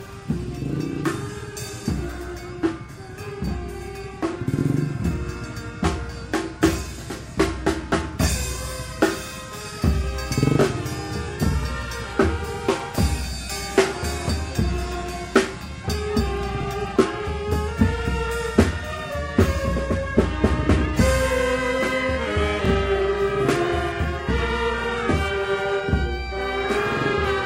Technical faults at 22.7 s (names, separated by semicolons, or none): overlapping chunks